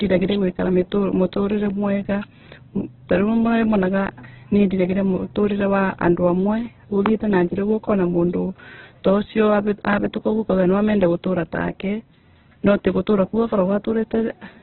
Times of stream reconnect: none

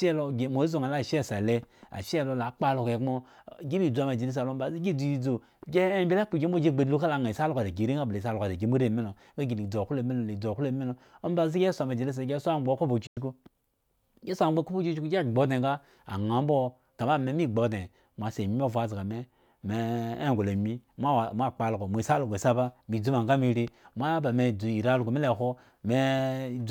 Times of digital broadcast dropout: 13.06-13.17

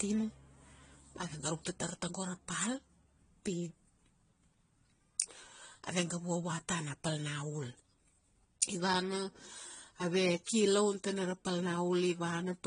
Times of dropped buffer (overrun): none

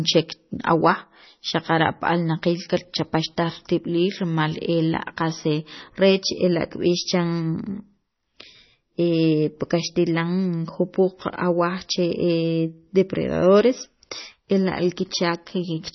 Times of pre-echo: none

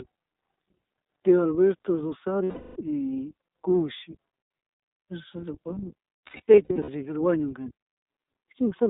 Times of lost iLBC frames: 2.44-2.77, 6.28-6.89

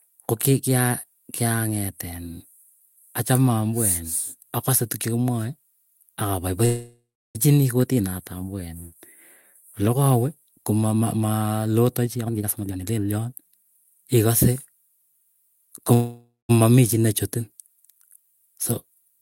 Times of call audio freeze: 6.65-7.37, 15.93-16.51

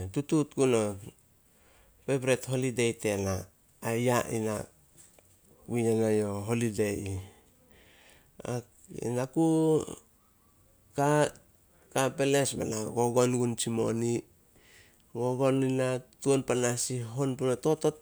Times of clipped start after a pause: none

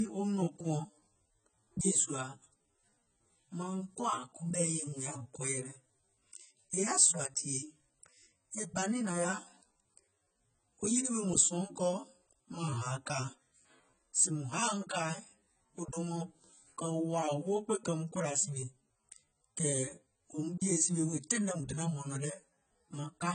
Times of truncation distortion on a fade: none

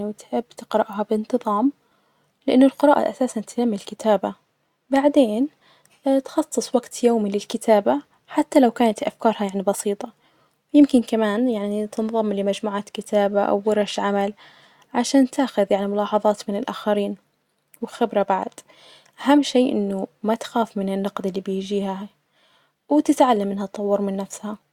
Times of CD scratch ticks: none

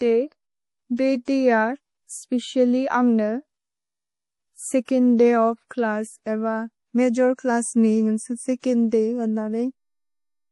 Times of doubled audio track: none

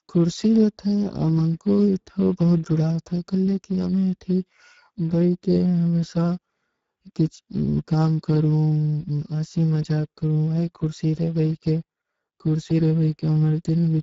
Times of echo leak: none

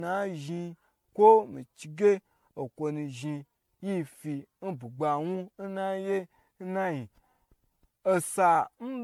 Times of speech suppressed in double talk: none

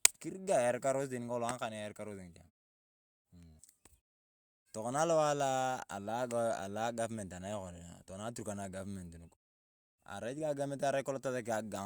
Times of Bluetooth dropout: none

